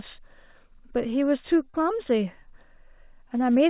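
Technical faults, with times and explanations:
1.64–1.83 s, short stall from a late packet: a packet arrived late and the jitter buffer ran empty. The receiver held the last sound for about 19 ms until the packet arrived, then resumed from the same point. Nothing is lost, but the sound drags briefly with a faint buzz or dip.
1.70–1.77 s, short concealed packet loss: inside that stall, 40 ms of audio never reached the decoder in time. The receiver covered 38 ms of the gap by extending the preceding sound, then blended back into the real signal. The result is a brief smear or wobble on this G.711 line, which carries nothing above 4 kHz.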